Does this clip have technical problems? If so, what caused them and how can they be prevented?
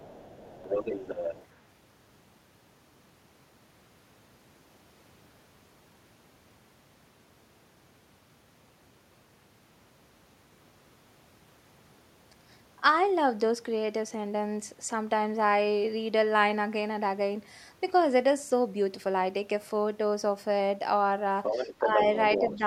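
Yes. There is other side's voice leaking through from 0.0 to 1.46 s, 21.43 to 22.17 s and 22.33 to 22.59 s. A second voice sits about 10 dB, then about 5 dB, under the speech. The likely cause is an echo canceller leaving loudspeaker sound in the microphone. A headset, or a better-tuned echo canceller, would prevent it.

There is also speech suppressed in double talk at 21.79 to 21.99 s and 22.58 to 22.64 s. The voice dips by roughly 5 dB and then roughly 10 dB, for brief moments. This likely happened because the canceller turned both talkers down while they overlapped. Full-duplex echo cancellation with proper double-talk detection would prevent it.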